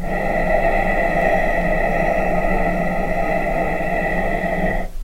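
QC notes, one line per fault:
Nothing to flag here, no problems turned up anywhere in the clip.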